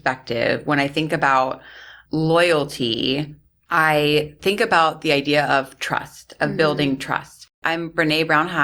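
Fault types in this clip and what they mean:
No technical faults are audible anywhere in this recording.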